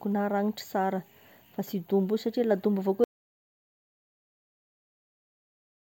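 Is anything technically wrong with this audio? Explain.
Yes. At 3.04 s the speech cuts off abruptly into dead silence, with no room tone, and stays silent to the end of the clip. This is an audio dropout to silence, likely from the input being lost while the recorder kept writing silence.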